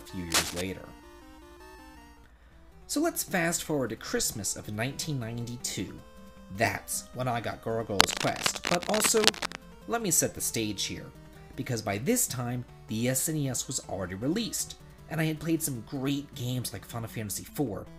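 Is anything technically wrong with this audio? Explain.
Yes. Cable scratch noise appears twice, from 0.30 to 0.61 s and from 7.99 to 9.56 s. A worn cable, connector or control being moved is the likely cause: its contact resistance fluctuates, adding dense, irregular noise bursts that scratch and rustle over the audio, somewhat louder than the sound itself.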